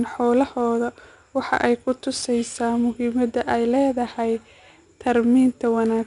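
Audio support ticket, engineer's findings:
Gritty hiss riding on louder speech throughout, rolling up and down with level rather than sitting as a fixed floor: 4-bit ADPCM compression. Content stops at 10.6 kHz, which fits about 89 kbps.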